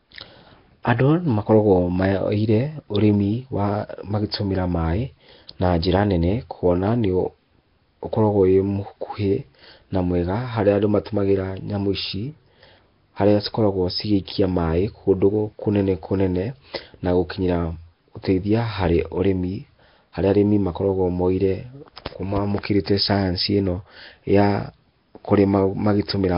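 From start to finish the speech carries heavy damage: a rough, hissy halo and a smeared, underwater quality, with nothing above 5.3 kHz. The likely cause is Nellymoser compression, the old Flash microphone codec, which spends a fixed two bits per sample on short blocks and fills bands it cannot afford with noise. The damage fits a rate near 22 kbps. Unlike the metallic warble of a starved MP3, the lost detail returns as grainy noise rather than swirling tones.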